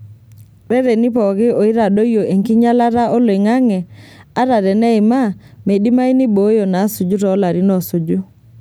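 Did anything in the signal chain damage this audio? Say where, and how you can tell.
No, nothing along the chain audibly damaged this speech, from capture through playback.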